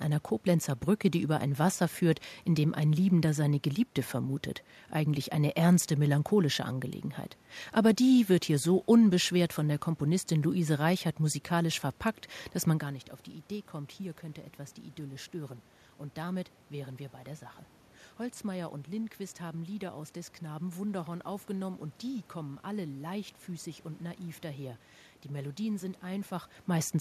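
No technical fault can be heard anywhere in this speech recording. The room's background noise stays audible throughout, and the voice level shifts at the microphone around 12 seconds and again near the end as the talker changes position.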